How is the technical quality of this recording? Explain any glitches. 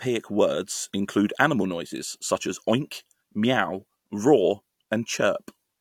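No glitches or technical faults can be heard anywhere in the recording.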